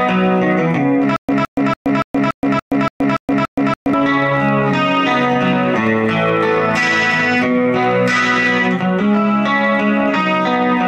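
From 1.16 to 3.94 s there is a stutter with silent gaps: a 162 ms fragment repeats nine times, each followed by about 124 ms of silence, a 286 ms cycle, likely from a stalled stream replaying its last buffer. The waveform shows identical blocks separated by flat stretches, and the spectrogram shows matching blocks between blank columns.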